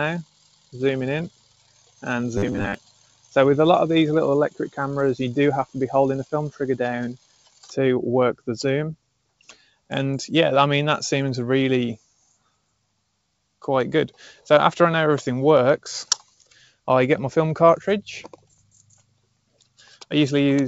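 A speech-oriented noise suppressor was left running on audio that is not speech. It treats steady tones, ambience and decays as noise, so the gain swings by about 20 dB across the clip. Held material and tails sink while attacks get through, which makes the level pump and thin out. The deepest cuts fall at 0.23 to 3.36 s (about 21 dB down, roughly two seconds affected in total), 4.5 to 9.91 s (about 22 dB, again roughly two seconds), 11.98 to 14.46 s (about 21 dB, under a second), 16.2 to 16.77 s (about 16 dB, under half a second) and 18.3 s to the end (about 21 dB). In these stretches sustained sound drops away or its decay is clipped short.

Inside the first of those stretches, from 2.37 to 2.74 s, the sound turns into a rigid, metallic buzz at 100 Hz that only loosely follows the original. This is robotic sound from repeated short buffers. The likely cause is that new audio arrived too slowly and the last short block was replayed in its place, with roughly half of that span being repeats. 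A 100 Hz buzz fits a 10 ms buffer.

The audio also passed through a WebRTC call path using G.722 at 64 kbps, which adds that codec's own coding character to the signal.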